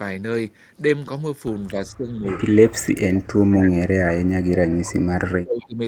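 Speech suppressed in double talk occurs from 1.91 to 2.24 s, 2.53 to 3.72 s, 3.88 to 4.82 s and 5.31 to 5.8 s. The speech sinks by roughly 20 dB in the first stretch and by around 30 dB in the later ones, thinning and breaking up. The likely cause is an echo canceller that, with both ends talking at once, could not tell this talker from returning loudspeaker echo and pulled everything down together.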